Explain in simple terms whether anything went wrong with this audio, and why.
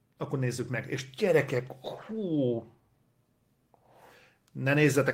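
Some packets never arrived, but each following packet carried a rough backup copy, so this is a lost packet rebuilt from error correction. At 0.45 s and from 1.97 to 2.39 s, the speech briefly sounds grainier and noisier instead of dropping out.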